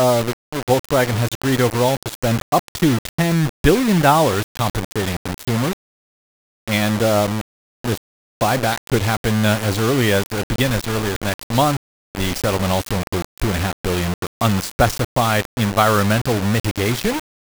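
A speech clip carrying grainy, gritty distortion from start to finish that rises and falls with the voice, the sound of low bit depth without dither: the audio was likely rounded to only about 4 bits, leaving an error that tracks the signal and sits only around 10 dB below it. Quiet syllables sputter or vanish between steps. A zoomed waveform shows coarse staircase levels, and a spectrogram shows broadband hash smeared over every sound that drops out in the pauses.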